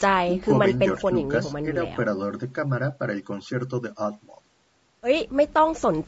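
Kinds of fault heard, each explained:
Low-delay AAC compression: the speech sounds plainly rough and grainy throughout, likely from AAC-ELD's short frames coding harmonics poorly at a rate fitting about 32 kbps.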